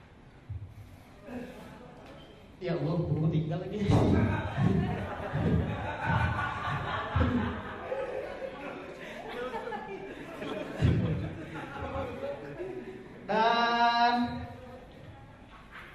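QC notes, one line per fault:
5.09–5.29 s, 10.43–10.63 s, 11.85–12.05 s, 14.57–14.76 s, frames out of order: in each 0.2 s window, two adjacent blocks of about 93 ms (consistent with four frames each) play in swapped order, so the later material comes first and no time is lost. The result is a brief garbled flutter. On a waveform, the envelope shows abrupt steps at each seam. A spectrogram shows vertical edges where the spectral content jumps out of sequence.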